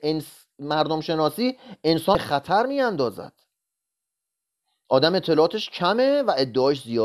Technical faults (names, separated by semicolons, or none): damaged data in a compressed stream